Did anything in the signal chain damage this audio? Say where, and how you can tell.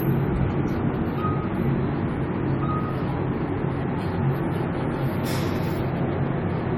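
Yes, at the codec stage. Across the whole clip it sounds swirly, smeared and hollow, attacks are blurred, and nothing comes through above 19.3 kHz. That's generation loss, likely from about five rounds of AAC-LC at something like 64 kbit/s, each pass adding fresh quantisation damage.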